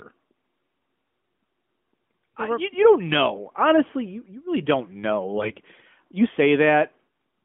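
Speech through a narrowband mobile codec. Just after "you really don't know", from 5.38 to 5.53 s, AMR bit errors turn the sound hoarse and gargly: pitch and level persist, unlike dropped-frame gaps, because roughly 4% of the less protected bits were corrupted on a weak link.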